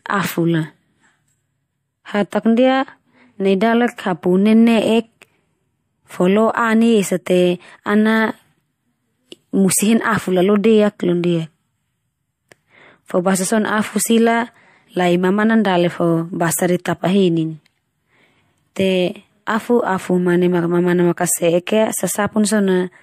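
This speech clip has pre-echo before two sharp attacks, at 2.30 s and 18.74 s. A short hiss rises about 20 ms ahead of each onset, about 15 dB above the background at the first and about 12 dB at the second. Both attacks sound softened and smeared. A transform codec spread quantisation noise across a whole block, so the quiet gap before each attack filled with noise. The spread fits a block of roughly 36 ms with no switch to short blocks.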